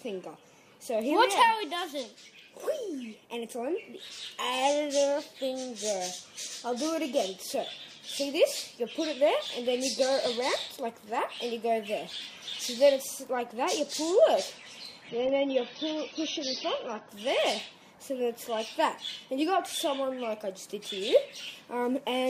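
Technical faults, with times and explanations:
15.09 to 17.09 s, adaptive stream at a lower bitrate: for two seconds the top end abruptly dulls, with nothing above about 6.3 kHz and a smeared, swirly texture, then full quality snaps back without a gap, which fits the stream briefly dropping from roughly 96 to 24 kbit/s AAC.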